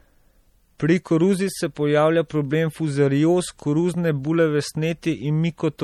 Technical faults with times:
0.00-5.84 MP3 compression

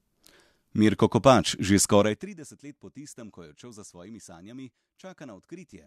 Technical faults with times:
none

